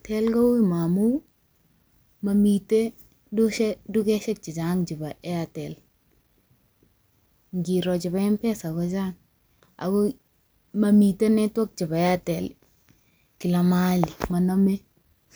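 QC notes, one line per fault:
No technical faults are audible anywhere in the speech signal.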